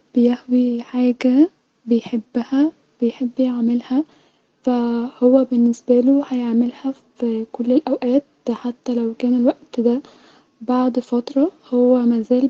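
Nothing in this speech recording stood out as a technical problem on listening.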